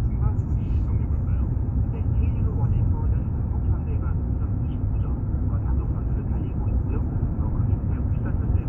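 Nothing in this recording of sounds stands out as a technical fault, so there's nothing here to flag.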